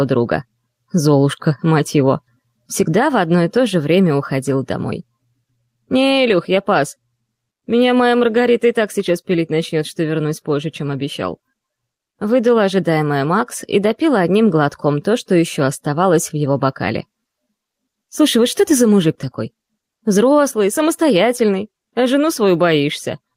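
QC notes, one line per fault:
Throughout, gain pumping: the level swings roughly 10 dB, so levels flatten out and the sound gets squashed. Likely the input gain is far too hot and a fast limiter keeps clamping it down.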